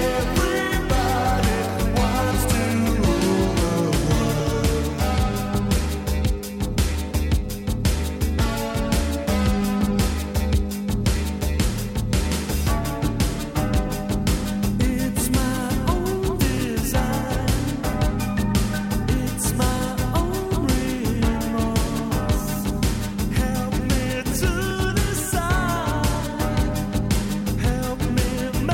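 A regular click recurs about every 1.36 s from 0.34 s to 27.42 s, roughly twenty in all, each a small discontinuity where a short block of samples, around 50, is dropped or repeated. This is likely clock drift buffer slips: two devices on independent clocks disagreeing by something like 700 ppm, so the buffer between them creeps toward empty or full until it slips, then starts drifting again at the same rate.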